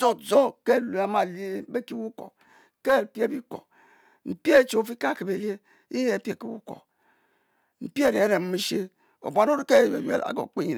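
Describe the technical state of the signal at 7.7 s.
At 7.7 s the speech signal is intact, with no audible dropout, clipping, distortion or other technical fault.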